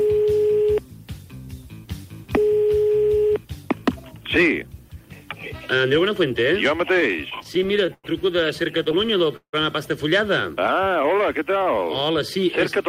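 Clock slip clicks run from 0.12 s to the end as faint, regular ticks roughly every 70 ms. The likely cause is two independently clocked devices drifting apart by around 300 ppm, so a single sample is dropped or repeated each time the offset reaches a whole sample.

Repeated stalls (stutter) appear in three bursts: 6.93 to 8.06 s (12 gaps, 223 ms filled, longest 102 ms), 8.78 to 9.55 s (7 gaps, 223 ms filled, longest 167 ms), and 10.67 to 11.05 s (4 short gaps totalling 33 ms). Packets arrived late, the jitter buffer kept running dry, and the receiver extended the last sound each time. Nothing is lost, but the audio drags and catches.

A jitter buffer slow-down follows from 10.78 to 12.45 s. The receiver repeated small pitch periods to rebuild its reserve, adding 123 ms and playing at 93% speed. The sound runs slower at unchanged pitch, with stretched passages.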